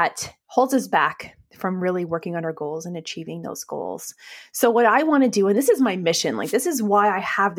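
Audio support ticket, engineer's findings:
Wireless microphone noise hit at 6.42 to 6.55 s, after "this is my mission": static swish. Analogue FM multipath fade lifts receiver hiss. Noise-filled, unlike a digital dropout's silent gap.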